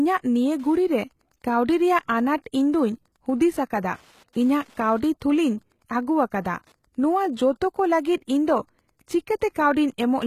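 HE-AAC compression, throughout: the treble above the lower band sounds rebuilt rather than original, cutting off at 14.9 kHz, likely spectral band replication at a low bitrate near 20 kbps.

Wi-Fi interference, 0.40 s to the end: a nearby radio's beacon, rectified by the audio circuit, ticks steadily every 102.4 ms, roughly 40 dB below the speech.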